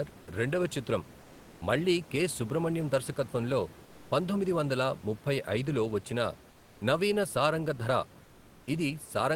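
At 1.21–1.61 s, 3.85–4.11 s and 6.51–6.81 s, comfort noise replaces the room background, likely from discontinuous transmission: flat, featureless hiss about 1–3 dB quieter, smooth and textureless on a spectrogram.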